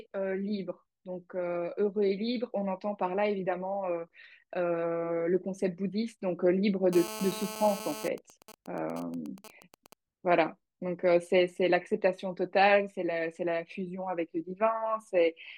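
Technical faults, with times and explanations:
6.93–8.08 s, GSM phone buzz: a hard, raspy buzz sits about 10 dB below the speech, pulsing at 216.7 Hz and carrying a dense stack of harmonics that has no relation to the talker. A nearby 2G phone is in an active call, and its transmitter fires radio bursts 217 times a second. The audio circuitry rectifies each burst, turning the radio pulses into an audible square-edged tone. Because the call keeps transmitting continuously, the buzz holds steady for its whole span.
8.18–9.93 s, GSM signalling bursts: the steady buzz gives way to a quieter pattern of even ticks with a longer 217 Hz buzz twice a second, roughly 20 dB under the speech. The same phone is still in the call, but its user has stopped talking, so it transmits only short groups of bursts instead of a continuous stream. Each group is rectified by the audio circuit into a tick or a short burst of buzz, and the gaps between groups create the even, rhythmic pattern.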